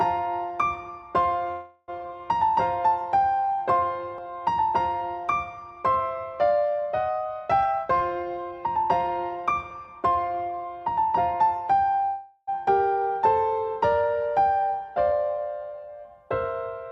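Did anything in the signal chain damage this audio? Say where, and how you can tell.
Yes. At the network stage, packets were most likely held up in transit, twice, and the jitter buffer ran dry, causing a call audio freeze. From 1.51 to 1.90 s and from 12.06 to 12.49 s, the receiver stretched the last sound into a fading buzz or hiss rather than leaving silence, filling about 0.36 s and 0.41 s. When packets resumed, the sound picked up exactly where it stopped with nothing lost, so each freeze added its own length to the delay.

At the jitter buffer, a backlog of late packets pushed it past its target depth, causing a jitter buffer speed-up. The receiver trimmed out short pitch-period chunks again and again to catch up. From 7.61 to 8.85 s the sound runs at 124% speed at unchanged pitch, shedding around a third of a second and sounding rushed. A milder catch-up at 109% follows from 9.36 to 9.88 s, dropping only a sliver.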